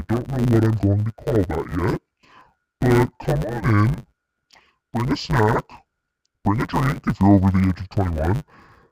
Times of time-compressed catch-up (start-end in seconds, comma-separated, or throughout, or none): none